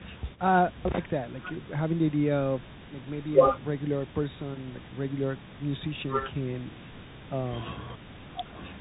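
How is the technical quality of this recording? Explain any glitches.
The recording is compromised: the whole speech clip has passed through a Bluetooth CVSD headset codec, and the damage is plainly audible from start to finish. CVSD sends one bit per sample, up or down, with a step size that adapts, consistent with a 64 kbps headset link. Bandwidth stops near 4 kHz, so the voice sounds muffled and phone-like. Sibilants turn scratchy, loud bright passages distort where the step can't keep up, and a granular hiss sits underneath. A spectrogram shows a hard ceiling around 4 kHz over a grainy noise floor, while the waveform shows stair-stepped, slope-limited edges.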